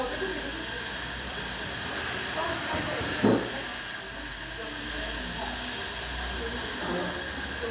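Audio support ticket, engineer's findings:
Nothing stood out on listening to these everyday sounds, which arrive band-limited to below 4 kHz as expected from a G.711 mu-law call path at 64 kbps.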